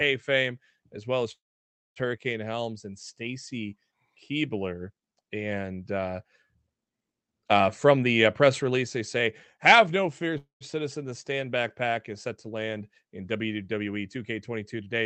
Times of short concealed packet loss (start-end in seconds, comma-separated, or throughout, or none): none